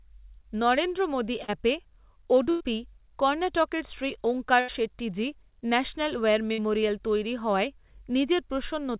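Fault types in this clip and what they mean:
Short concealed packet loss: about 40 ms of speech never arrived at 1.44 s, just after "নরেন্দ্র মোদী", and was patched by extending the preceding sound. It leaves only a brief smear or wobble, too short to hold and fade the way a burst does.
Burst of packet loss: runs of lost packets at 2.5 s (about 100 ms), 4.6 s (80 ms) and 6.52 s (60 ms). The last sound is held, turning to a buzz or fading hiss, then speech resumes with a stretch missing, unlike a short loss's mere smear.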